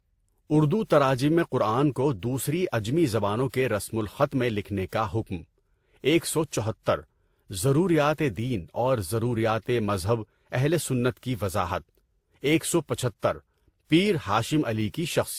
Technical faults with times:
0.00-15.38 transcoding between lossy codecs

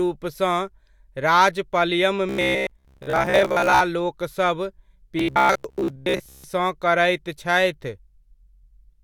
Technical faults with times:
2.29-3.82 robotic sound from repeated short buffers
5.19-6.44 robotic sound from repeated short buffers

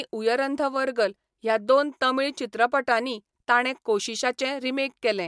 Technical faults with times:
none

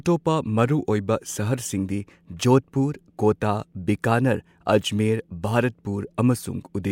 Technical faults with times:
none

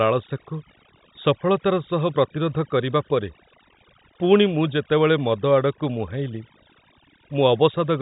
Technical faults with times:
0.00-8.01 overdone noise removal

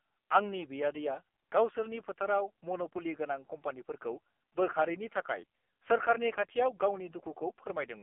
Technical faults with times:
0.00-8.03 AMR narrowband mobile codec

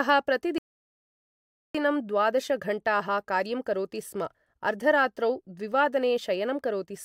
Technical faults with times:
0.58-1.75 rebuffering stall

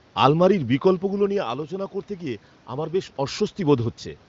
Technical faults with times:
none

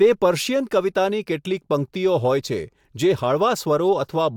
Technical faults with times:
none

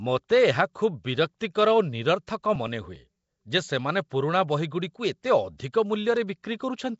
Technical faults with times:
0.00-6.99 Nellymoser compression
6.17 bit error spike

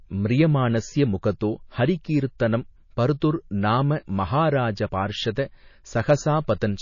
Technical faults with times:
0.00-6.82 MP3 compression

